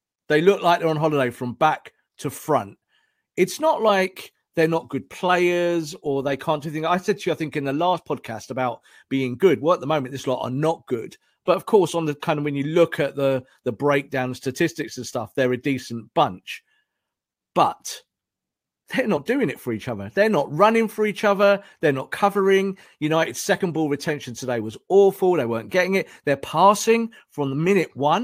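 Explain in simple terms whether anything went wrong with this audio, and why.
Damaged data in a compressed stream at 23.6 s: corrupted bytes confused the decoder, causing a brief blip just before "ball retention today was".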